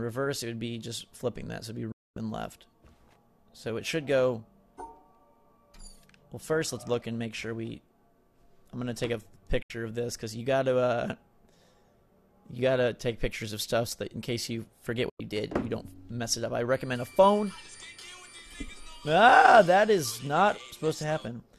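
At 1.92 s the sound fades to silence within 3 ms and returns at 2.17 s, a 240 ms hole. This is a digital broadcast dropout. The receiver muted while frames were lost. Shorter holes follow at 9.62 s, lasting 72 ms, and at 15.10 s, lasting 96 ms. All three lengths fit frames of about 24 ms each.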